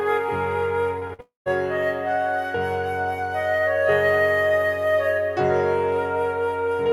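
A short music recording that breaks up just after the one-second mark. Two short concealed packet losses come at 0.99 to 1.03 s and 1.07 to 1.11 s. In each, 20 ms of audio went missing and was patched by extending the preceding sound. They are heard as quick smears, and on a spectrogram they look like narrow vertical seams where the harmonic texture briefly freezes. A burst of packet loss follows from 1.13 to 1.21 s. About 60 ms is lost, and roughly 51 ms of it is filled with a held, fading continuation of the last sound, so the music jumps ahead slightly when it resumes. In the waveform the envelope sags smoothly instead of following the music, and the spectrogram shows smeared, horizontally stretched partials. Straight after it, from 1.21 to 1.48 s, the sound drops out for a longer stretch, likely a long network dropout. About 260 ms of the music never plays. A fading continuation of the last sound bridges the first part, and the last 150 ms or so is near silence before the music picks up again further along. 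The waveform shows a decaying tail collapsing to a flat line, and the spectrogram a blurred band that thins into an empty gap.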